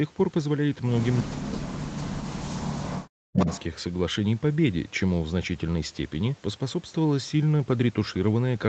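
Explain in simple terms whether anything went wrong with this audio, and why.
Two problems can be heard in this speech.

The first is an echo leak. From 1.18 to 1.22 s, a faint delayed copy of the voice slips through, about a third of a second late. From 3.39 to 3.64 s it happens again, arriving roughly 0.4 s late and much louder this time. The likely cause is a loudspeaker on the far end. Its microphone picked the sound back up, and the echo canceller failed to remove all of it.

The second is speech suppressed in double talk. From 1.23 to 3.47 s, the voice drops away sharply, at times almost to nothing, for about two seconds in total. This likely happened because both sides spoke at once. The echo canceller could not tell the talker from the echo, so it turned both down.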